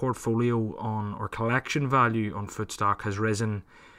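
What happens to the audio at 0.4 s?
Nothing goes wrong at 0.4 s; the speech there plays through intact, with no dropout, click or distortion.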